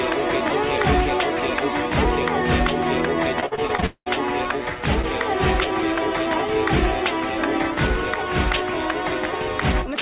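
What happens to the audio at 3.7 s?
At 3.7 s the audio is in a stretch of repeated packet loss (robotic sound), from 3.40 to 4.08 s. Packets go missing seven times. Each hole is patched by extending the preceding sound, covering about half the span. The longest gap lasts 199 ms. The result is choppy, with pieces missing.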